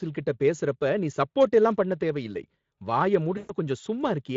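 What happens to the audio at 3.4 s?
At 3.37 to 3.52 s, VoIP packet loss concealed by the speech codec: about 120 ms of data, which fits six 20 ms frames, is replaced by the decoder repeating its last pitch and filter. Unlike a clean dropout, there is no silence; the sound smears into a buzzy tone or coloured noise that fades.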